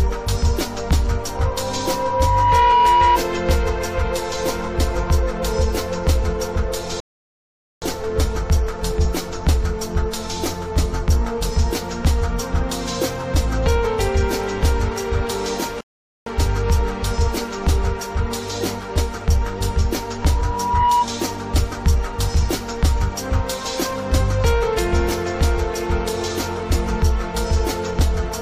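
From 1.33 to 3.20 s a loudspeaker feedback squeal builds over about a second and a half into a steady 969 Hz tone, roughly 5 dB above the programme. The microphone is re-amplifying its own loudspeaker with loop gain above unity at that frequency. The same tone returns from 20.20 to 21.08 s, swelling faster, in well under a second. At 7.00 s and 15.81 s the audio drops to silence for 0.82 s and 0.46 s respectively. These are rebuffering stalls: playback ran dry waiting for data, then resumed exactly where it left off, adding time without losing any material.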